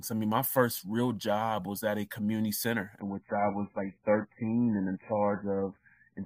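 At 3.00 s, right after "at a community center", the speech switches abruptly to an adaptive stream at a lower bitrate and stays there to the end. The connection evidently slowed, so the player swapped to a much leaner encoding without any gap. Content above 2.5 kHz disappears, leaving a muffled, band-limited sound with heavy coding artefacts. The sudden drop in quality fits a fall from around 128 kbit/s MP3 to roughly 8 kbit/s.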